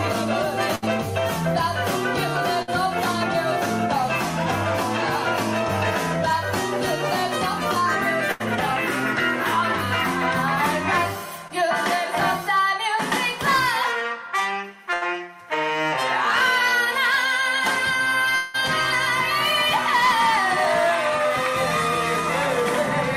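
At 0.75 to 0.84 s, 2.62 to 2.70 s, 8.32 to 8.42 s and 14.94 to 15.03 s there are bursts of packet loss. Each time, 60 to 80 ms of audio goes missing. The receiver stretches the last sound into a fading buzz or hiss before the audio picks up later. On a spectrogram, each shows as smeared, decaying bands ending in a hard join.

Around 11.48 to 11.52 s, a short concealed packet loss hides 20 ms behind synthesized fill. It sounds like a brief smear or wobble. The waveform shows a splice.

From 18.35 to 18.56 s, about 180 ms drops out and is replaced by a continued buzz or hiss that fades without reaching silence. The spectrogram shows a blurred, dimming stretch, then an abrupt return. The likely cause is a long network dropout.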